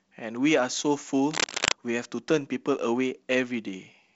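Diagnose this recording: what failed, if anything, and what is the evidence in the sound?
Cable scratch noise from 1.31 to 1.72 s, at the analogue wiring stage: a dense, uneven burst of scratching rides over the speech, roughly 5 dB above it. The likely cause is a worn cable or connector being moved, its contact resistance fluctuating rapidly and injecting noise.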